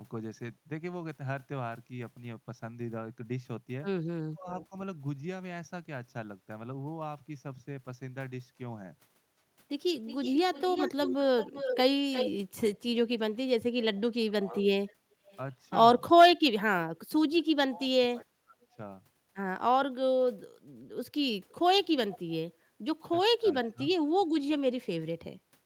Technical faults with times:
4.29-4.76 speech suppressed in double talk
4.60-4.65 echo leak
10.07-12.79 echo leak
13.96-15.38 echo leak
14.05-14.64 speech suppressed in double talk
17.65-18.77 speech suppressed in double talk
21.49-22.19 echo leak
23.39-23.95 speech suppressed in double talk

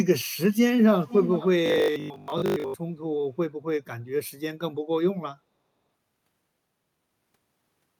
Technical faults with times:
1.01-1.48 echo leak
1.66-2.74 robotic sound from repeated short buffers

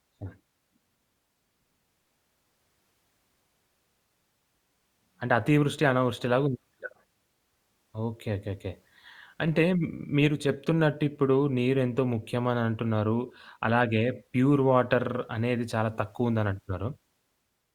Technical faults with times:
none

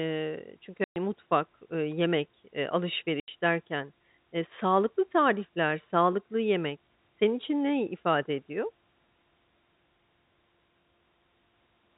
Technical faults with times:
0.84-0.96 packet loss filled with silence
3.20-3.28 packet loss filled with silence

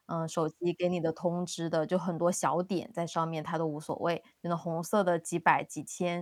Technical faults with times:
0.79-5.45 clock drift buffer slips

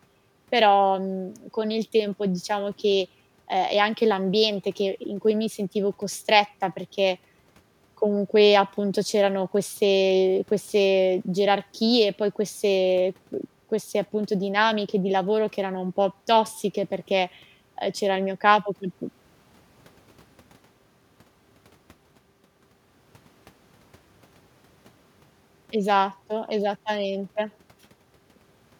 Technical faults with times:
none

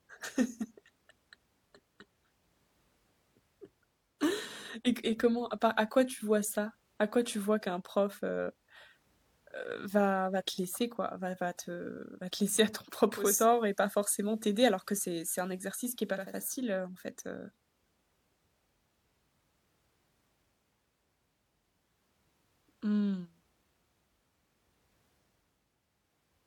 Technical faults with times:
13.13-16.41 digital radio blending to analogue

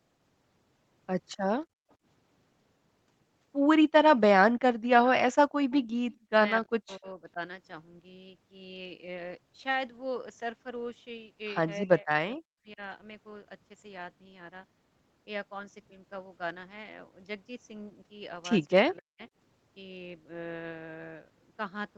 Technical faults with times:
1.32-1.36 echo leak
1.70-1.85 background gated by the echo canceller
4.51-7.40 speech suppressed in double talk
4.84-6.17 echo leak
6.18-6.29 background gated by the echo canceller
11.81-12.81 speech suppressed in double talk
18.68-18.73 echo leak
18.82-19.20 speech suppressed in double talk

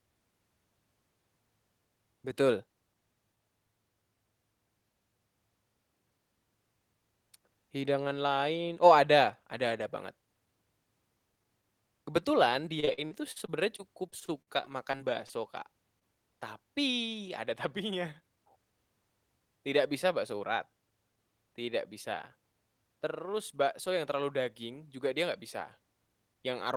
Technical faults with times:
12.75-15.31 repeated packet loss (robotic sound)
15.99-16.03 short concealed packet loss
18.20-18.73 jitter buffer speed-up

